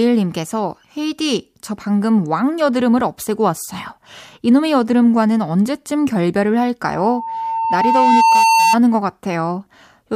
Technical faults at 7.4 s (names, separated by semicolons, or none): loudspeaker feedback squeal